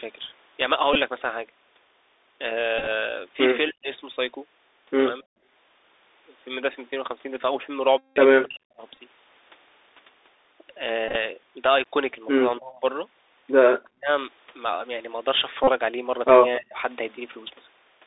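Throughout, the speech carries the Bluetooth CVSD headset codec: the band runs only from about 300 Hz to 3.7 kHz, s sounds come out scratchy, loud bright syllables distort where the one-bit up/down delta steps can't keep pace, and a grainy hiss sits beneath everything. That narrowband, granular character, rather than a clean telephone band, points to a 64 kbps CVSD link.

Bluetooth headset packet repeats fall at 0.93 to 0.95 s, 2.79 to 2.88 s, 4.14 to 4.16 s, 7.98 to 8.18 s, 8.93 to 8.99 s, 11.09 to 11.16 s and 15.64 to 15.69 s. When the link drops packets, the decoder reuses the previous packet's bits, so the short ones click and the longer runs buzz at a steady pitch near 267 Hz, the rate of a 3.75 ms packet. The longest is the 0.2 s stretch at 7.98 s. A buzz of fixed pitch sets this apart from a plain dropout, where the audio would simply go silent.

Speech suppressed in double talk appears at 3.69 to 3.89 s, 8.44 to 8.82 s, 12.59 to 12.83 s, 13.82 to 14.09 s and 16.57 to 16.77 s. 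The level sinks by about 40 dB at its deepest, and by about 25 dB in the mildest cases. This is likely an echo canceller ducking the talker while the far side also speaks. Unlike the packet repeats, these dips add no buzz or tone. The voice just thins and falls away for a fraction of a second.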